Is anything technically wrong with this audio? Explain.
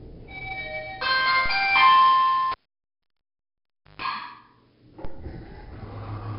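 Yes, there are three problems here.

The whole clip has heavy 4-bit ADPCM compression. Each sample is stored as a small 4-bit step from a predicted value, and the step size adapts as the signal changes. The resulting error is noise that rises and falls with the level, so every loud moment carries a gritty hiss and sharp attacks smear. Nothing comes through above about 5.3 kHz, which points to a low sample rate of around 11 kHz. That, along with the roughly 44 kbps rate, also leaves the sound dull.

From 2.52 to 4.02 s you can hear a cable pulled and plugged in. There's a pop as the connection breaks, then about 1.45 s of near silence. Next comes a 138 ms burst of 50 Hz mains buzz while only the plug tip is making contact, which is the hum a half-seated jack picks up. A second pop follows as the full signal comes back.

At 5.05 s there's a DC step. The waveform's zero line suddenly jumps, as it would when a converter recalibrates or an input with an offset is switched in. 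That jump comes across as a low thump, while the sound carrying on over it is unaffected. The offset then drains away gradually, the way a 2 Hz high-pass filter would pull it back to zero.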